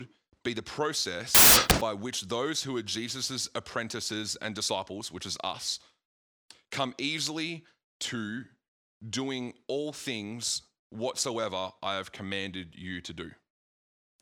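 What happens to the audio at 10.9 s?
At 10.9 s the speech carries on intact, with no dropout, click, distortion or other fault at that point.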